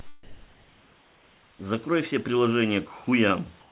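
At 3.04 to 3.06 s, 20 ms of speech gives way to a brief patch of steady, smooth noise before the sound resumes, most likely sound dropped by the voice detector: the sender judged that moment to be background, stopped transmitting, and the receiver filled the gap with comfort noise. On a spectrogram this appears as a narrow vertical strip where the speech harmonics vanish and a flat, even haze takes their place. The waveform shows a short run of low, uniform noise.

From 3.60 to 3.70 s, the real room background is replaced by comfort noise in place of the background. This likely comes from discontinuous transmission, where the sender went quiet during a pause and the receiver synthesised noise roughly matching the background. That background sits about 34 dB below the loud parts, and the substitute is about 1 dB different in level, so the change is subtle: the texture becomes steadier and more featureless for 100 ms. 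On a spectrogram the irregular grain of the room noise gives way to a smooth, even wash. Everything stays capped at 4 kHz by the telephone-band call path, which points to a G.711-type codec.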